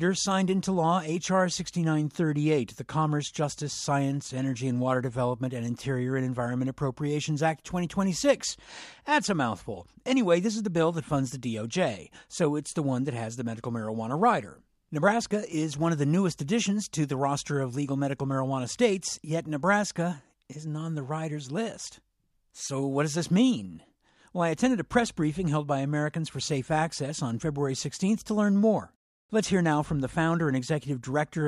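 From start to finish there's crude rate conversion. The sound was resampled by straight linear interpolation with no proper filtering, and the ratio fits a 32 kHz to 44.1 kHz jump. The leftover error, around 30 dB down, comes through as a gritty, inharmonic fizz riding on loud and bright passages.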